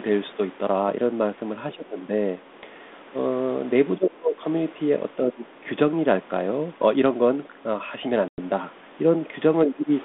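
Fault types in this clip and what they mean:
Speech suppressed in double talk: three short dips, at about 1.75, 3.97 and 9.65 s, where the speech sinks by roughly 20 to 30 dB for a few tenths of a second. It's likely an echo canceller that couldn't separate the near talker from loudspeaker echo while both sides talked, so it turned everything down.
Packet loss on an ADPCM call: a hard-edged 100 ms hole at 8.28 s, a handful of packets' worth, filled with silence. Afterwards the ADPCM decoder restarts with its predictor and step size out of step with the sender's, so the speech resumes from a mismatched state until the two realign.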